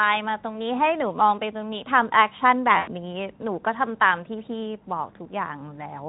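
From 2.77 to 2.91 s the speech drops into VoIP packet loss concealed by the speech codec. Roughly 100 ms of packets went missing, consistent with five 20 ms frames, and the decoder bridged the gap by repeating its last pitch and spectral envelope at falling gain. The result is a short stretch of buzzy tone or coloured noise that fades out. The speech takes a moment after 2.91 s to regain full strength, with the Speex coding at its light level throughout.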